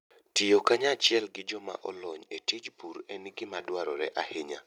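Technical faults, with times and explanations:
0.67 to 0.73 s, microphone overload: the loudest peaks push about 4 dB past the limit and get flattened, likely from input gain set too hot, giving a brief harsh crackle.
1.20 to 3.60 s, one channel drops out: the level falls abruptly by about 6 dB and stays down, likely because one stereo side vanished before the mono sum.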